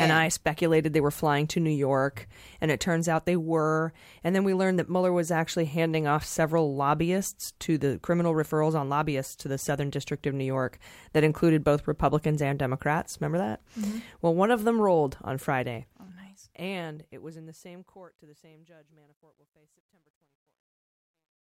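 Truncation distortion on a fade runs from 15.61 s to the end of this speech clip at 21.43 s, worst from 18.34 s onward. The fade-out, which begins around 15.6 s, passes through a level stage that keeps too few bits and adds no dither, which fits a 12-bit stage. As the level drops toward the smallest step, the waveform collapses into coarse square steps, so the tail turns gritty.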